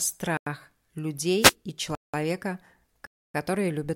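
At 0.37 to 0.46 s the speech drops into a block of digital silence lasting 93 ms, which fits a 4096-sample buffer the program failed to fill in time. It cuts out and back abruptly. The waveform shows a dead flat line, and the spectrogram an empty vertical band.

From 1.39 to 1.54 s a wireless microphone noise hit sounds as a short swish of static as the FM radio link fades and receiver noise rises over the speech. On the spectrogram it appears as a broadband hiss smear laid across the speech.

Two more blocks of digital silence follow. The one at 1.95 to 2.14 s lasts 186 ms, consistent with an 8192-sample buffer. The one at 3.07 to 3.34 s lasts 279 ms. Each is a short hole and a flatline.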